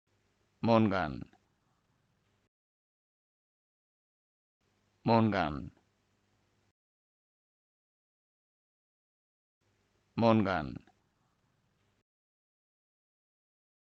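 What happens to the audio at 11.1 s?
Nothing goes wrong at 11.1 s; the audio plays through that moment intact, with no dropout, click, distortion or other fault.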